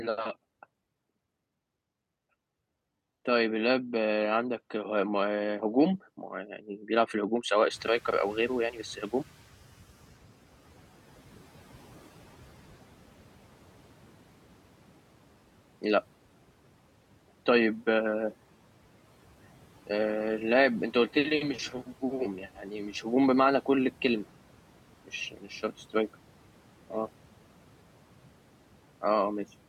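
Throughout the clip there are noise suppressor artifacts. It's pulling the steady background down by about 12 dB frame by frame, so the noise dips in the gaps and swells back under the speech.

From 6.3 to 6.89 s, the noise suppressor cuts speech. It mistakes some of the speech for noise and ducks it by up to about 10 dB over roughly a third of a second, so those sounds come out swallowed and faint.

Around 7.5 s the room noise jumps by about 24 dB, and from 7.7 to 9.91 s the noise suppressor is catching up. Its noise estimate lags, so the louder background comes through with little reduction at first. Over about 2.2 s it settles back to roughly 11 dB of cut.

At 25.31 to 25.45 s the speech gets cut again. It's a shorter bite this time, around a tenth of a second, dropped by up to about 10 dB.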